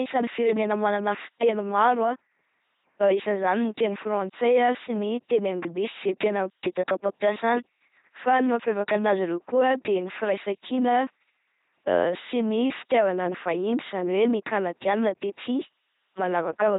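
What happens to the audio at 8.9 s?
At 8.9 s the speech carries LPC-10 vocoder damage, as it does throughout: a buzzy, robotic voice from a pulse-or-noise-excited filter, nothing above 3.9 kHz, consistent with 2.4 kbit/s.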